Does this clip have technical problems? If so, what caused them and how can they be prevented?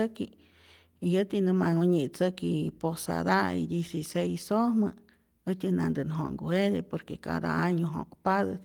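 No, no technical faults detected.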